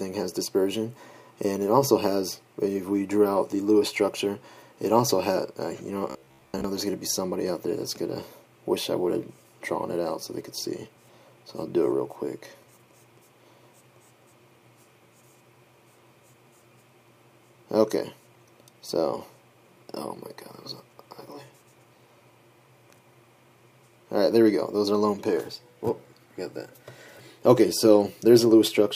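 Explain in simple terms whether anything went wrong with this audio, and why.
From 6.10 to 6.64 s the sound becomes a rigid, metallic buzz at a steady 67 Hz. This is robotic sound from repeated short buffers, likely caused by audio arriving too slowly, so snippets about 15 ms long replayed over most of that stretch. Unlike random crackle, it stays a steady, even buzz.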